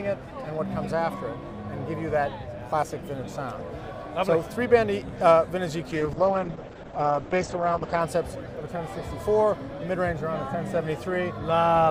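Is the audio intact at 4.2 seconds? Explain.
Yes, at 4.2 seconds the audio runs straight through with no dropout, click, glitch or other break to be heard.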